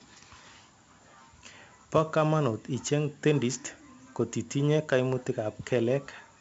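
Speech runs with 4-bit ADPCM compression damage heavy from start to finish. Each sample becomes a coarse 4-bit step from a prediction, so a gritty hiss rides on every loud syllable and sharp onsets smear where the step size lags. The top is flat above 7.7 kHz, which fits a 16 kHz rate and a 64 kbps stream. A spectrogram shows level-tracking noise filling between harmonics up to that hard ceiling. The waveform shows rounded, lagging attacks.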